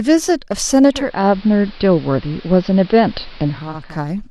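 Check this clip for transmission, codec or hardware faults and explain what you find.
One fault is present. From 0.87 s to 4.00 s the speech turns dull and hissy: the treble disappears, a clear hiss sits roughly 25 dB below the speech, and the level shifts by about 1 dB. The cause is digital radio blending to analogue. The receiver lost the digital stream and cross-faded over about half a second to the station's AM broadcast, whose narrow bandwidth and noise floor replace the clean digital sound before it blends back.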